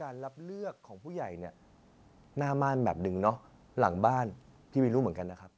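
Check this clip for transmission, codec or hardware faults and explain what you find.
No transmission, codec or hardware faults turn up in this speech clip.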